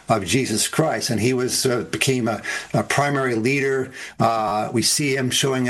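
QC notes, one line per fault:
4.48 to 4.52 s, repeated buffer: a brief buzzy stutter as one slice of about 11.6 ms plays four times with a hard join at each repeat. This fits a 512-sample buffer replayed three extra times when new audio arrived late. Essentially nothing is skipped.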